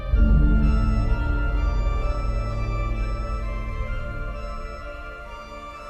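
Nothing in this audio stands out as a technical fault, so there's really nothing here to flag.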